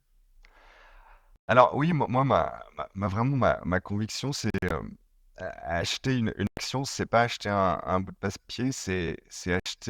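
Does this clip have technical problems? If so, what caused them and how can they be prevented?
Yes. Bluetooth dropouts break up the speech at 1.36–1.48 s, 4.50–4.71 s (several short gaps, the longest about 40 ms), 6.47–6.57 s and 9.60–9.66 s. These abrupt holes of 60–120 ms are likely wireless packets arriving too late to play, after which the speech resumes as if it had kept running. Keeping the headphones close to the source with a clear line of sight, and away from crowded 2.4 GHz traffic, prevents this.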